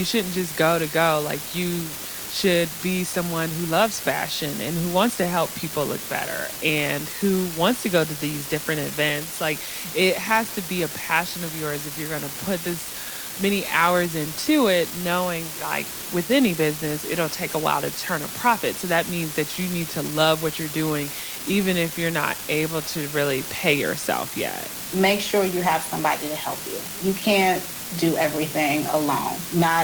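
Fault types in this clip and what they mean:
Unreliable data bit: one bit line in the digital path is flipping at random, so a scattered share of samples each jump by a fixed step of about -20 dBFS. Every error is the same-sized spike, heard as a steady fizzy crackle that runs through the whole clip and carries on in the pauses. That persistence in silence, and the uniform click size, separate it from clipping crackle, which only appears on loud peaks.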